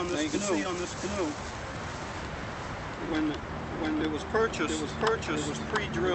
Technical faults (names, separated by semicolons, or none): doubled audio track; clock drift between sender and receiver; repeated timing corrections